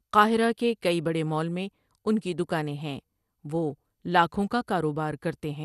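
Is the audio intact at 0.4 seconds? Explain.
No. MP2 compression damage runs throughout, including 0.4 s. The audio is dull, with nothing above 12.2 kHz and a gurgling, granular texture. Likely starved sub-bands, fitting roughly 80 kbps.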